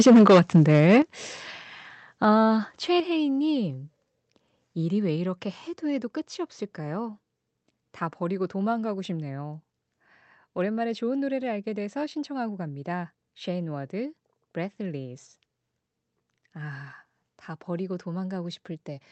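From 0 to 0.97 s the speech is harshly distorted, with a crackling edge on the loudest syllables. This is microphone overload, likely from input gain set high enough to push peaks about 7 dB past the converter's limit, flattening around a tenth of the samples.

At 1.02 s the speech and background drop abruptly by about 8 dB, then again at 3.0 s by about 5 dB. These are microphone volume step-downs, likely the call software cutting device input gain in response to the earlier clipping.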